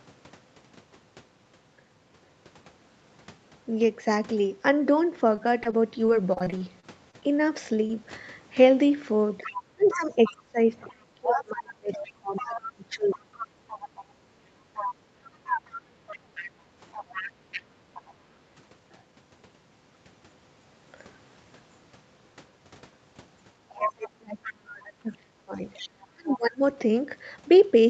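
From 5.36 to 7.24 s the speech turns choppy and robotic. Around a dozen tiny holes, the longest about 28 ms, are each patched by stretching out the sound just before it, so the voice buzzes and stutters with small pieces missing. This is repeated packet loss. Audio kept arriving too late or not at all, and concealment filled roughly an eighth of that stretch.

At 7.87 to 7.97 s a single brief smear or wobble passes through the voice. This is short concealed packet loss. About 20 ms of audio never reached the decoder, and the receiver bridged the hole by continuing the previous sound before blending back into the real signal.

From 9.42 to 13.27 s the talker's voice keeps sinking and breaking up, with the deepest dips about 30 dB down and around 3 s affected in total. From 23.69 to 26.61 s the same pattern affects about 2 s, again dropping by up to about 30 dB. This is speech suppressed in double talk. 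The likely cause is both parties speaking at once, so the echo canceller could not separate the talker from the loudspeaker echo and turned everything down.

Underneath the talker, a second voice comes through: from 9.43 to 14.05 s at about 15 dB below the speech, from 14.74 to 18.14 s at about 10 dB below, from 23.81 to 24.51 s at only about 5 dB below, and from 25.73 to 26.37 s at about 20 dB below. This is the other side's voice leaking through, likely loudspeaker echo that the canceller failed to fully remove from the microphone.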